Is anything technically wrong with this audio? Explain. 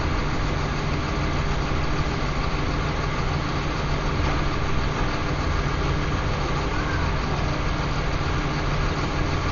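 Yes. Throughout the clip the sound is dull and heavily damaged, with nothing above 6.9 kHz and a rough, fluttering noise clinging to tonal parts. This is likely Dolby Digital compression at a very low rate, fitting roughly 48 kbps: the encoder narrows the band, starves many frequency lines of bits, and the decoder fills them with noise.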